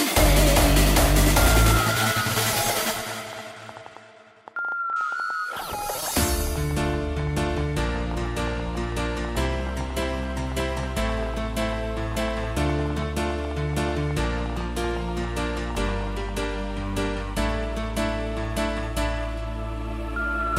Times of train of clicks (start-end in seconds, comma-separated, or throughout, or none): 0.04-16.44